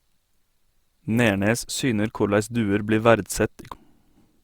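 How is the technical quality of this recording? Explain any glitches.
One glitch mars the recording. At 3.74 s, a CD skip: the laser jumped to another turn of the spiral, giving a roughly ten-millisecond tick-like mute before the speech resumes from a different point.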